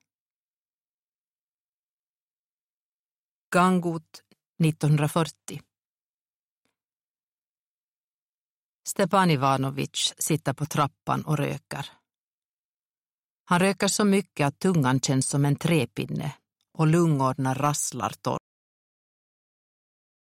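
At 18.38 s the audio has a cut-off end. The sound stops partway through, as though the final stretch of buffers was never written or played back, and the remaining 1.95 s to the end of the file is digital silence. The absence of any decay tells it apart from a fade-out or a natural ending. There is no tail, no room ring and no gradual level drop. The signal simply ceases.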